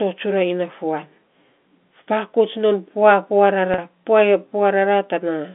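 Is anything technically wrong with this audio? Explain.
Yes. Packet loss with pitch repetition occurs at 3.74 to 3.78 s. About 40 ms went missing, consistent with two 20 ms packets, and the receiver bridged the gap by repeating the last pitch period while fading it. The result is a brief, buzzy hold. The waveform shows identical cycles shrinking in size, and the spectrogram shows frozen, evenly spaced harmonics.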